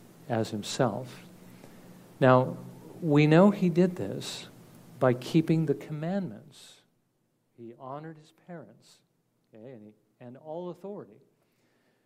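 From 5.56 to 7.00 s a rapid ticking, a zipper noise, rides on the sound while its level falls by roughly 20 dB. The fade is not a smooth ramp. The gain drops in discrete jumps, at a rate of around 400 a second, with no smoothing between them. Each jump puts a tiny discontinuity into the waveform, and in quick succession those small clicks merge into the buzzy, zipping texture heard across the fade.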